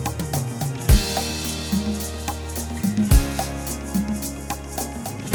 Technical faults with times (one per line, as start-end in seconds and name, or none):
none